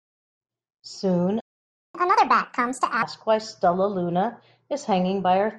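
In this speech recording, the sound cuts to silence from 1.40 to 1.95 s, a gap of about 0.54 s, then resumes where it stopped: a playback stall, likely from the player running out of data or its thread being blocked. From 1.95 to 3.02 s the speech runs at 1.5 times normal speed, with pitch raised by roughly seven semitones, before settling back. This is catch-up at higher speed, as the player resamples its backlog faster to recover the lost time.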